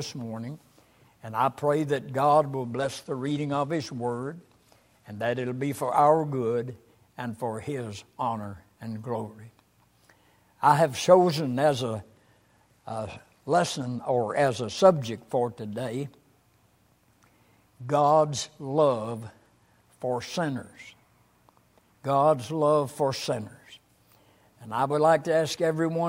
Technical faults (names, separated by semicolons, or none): Bluetooth SBC bit pool drop